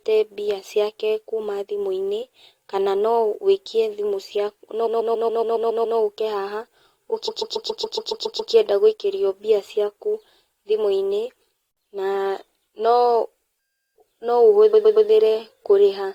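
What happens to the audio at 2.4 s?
Nothing goes wrong at 2.4 s; the speech runs through that moment intact, with no dropout, click or distortion.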